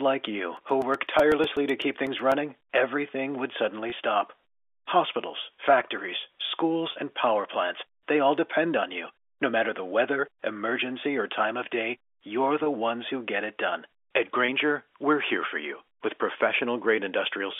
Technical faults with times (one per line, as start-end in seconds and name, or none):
0.57-2.32 periodic USB or driver dropouts
3.90-3.92 packet loss with pitch repetition
6.92-6.96 packet loss with pitch repetition
12.64-12.66 packet loss with pitch repetition
14.46-14.48 packet loss with pitch repetition